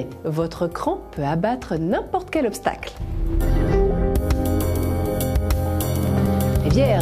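Nothing goes wrong anywhere in this one; there's not a single glitch, dropout or stray noise to point to from beginning to end.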